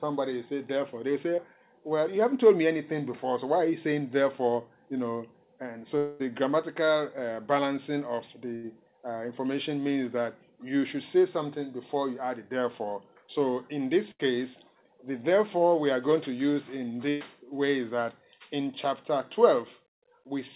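At 1.36 s a short concealed packet loss lasts about 0.04 s. A few hundredths of a second of audio arrived too late, and the decoder extended the preceding sound to cover it, leaving a brief smear or wobble. On a spectrogram it shows as a thin blurred sliver with harmonics stretched flat.

From 5.98 to 6.21 s the sound turns into a fading buzz or hiss that never drops to silence, and then resumes further on with material missing. The likely cause is a long network dropout: nothing arrived for roughly a quarter second, and concealment filled the whole gap. The waveform shows a decaying repetitive stretch, and the spectrogram shows smeared, frozen bands.

Bursts of packet loss hit at 8.55 to 8.65 s, 14.11 to 14.21 s, and 17.09 to 17.23 s, the last about 0.13 s long. In each, consecutive packets were lost and the receiver held the last sound while turning it down. The result is a brief held buzz or fading hiss. 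On the waveform it appears as a tapering envelope, and on the spectrogram as horizontally streaked energy.

Throughout, the audio stops at 4 kHz, which fits narrowband G.711 telephone coding.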